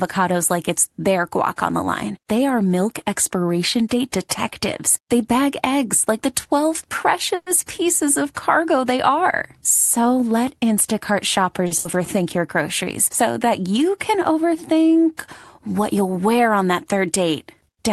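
At 7.35 s the incoming packets were likely held up in transit, so the jitter buffer ran dry and the call audio froze until 7.49 s. The receiver kept the last sound going as a fading buzz or hiss for about 110 ms, ending in roughly 20 ms of silence. When the packets arrived, playback picked up exactly where it had stopped. Nothing was lost, but a gap was inserted and everything after it now plays about 110 ms later.

At 11.67 s a single packet missed its playout time, causing a short stall. With nothing to play, the receiver stretched the preceding sound for about 40 ms until the packet arrived at 11.74 s, then continued from the same point. No audio is missing. The sound is held slightly too long, with a slight buzz or dip where the stretch was made.

Just after that, from 11.79 to 11.88 s, a burst of packet loss follows. Packets failed to arrive in time to be played, so the receiver covered the hole with about 60 ms of the last sound, fading it down as the gap went on. 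Playback then resumed further along, skipping about 80 ms of the original audio. The result is a brief held buzz or fading hiss with a small jump forward, and the delay falls back by about 20 ms.

Throughout the clip, the call codec's bandwidth stops at about 12 kHz.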